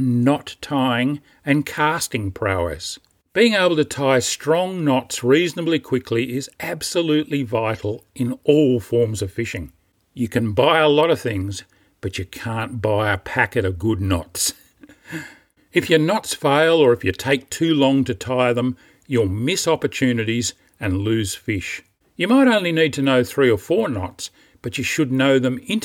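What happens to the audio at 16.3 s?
Nothing goes wrong at 16.3 s: the speech continues without any dropout, click, distortion or other audible fault at that point.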